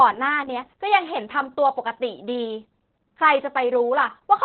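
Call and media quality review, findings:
Opus voice compression, throughout. Speech muffled, hoarse, slightly robotic; sibilants dull. Nothing above about 4.2 kHz, which fits narrowband SILK at roughly 8 kbps. The linear-prediction coder keeps the vocal-tract envelope but codes the excitation coarsely, hence the rasp. Spectrogram: hard ceiling near 4.2 kHz, smeared harmonics. Waveform: no clipping or dropouts, only a softened, buzzy fine structure. Component: encoder bitrate/bandwidth setting.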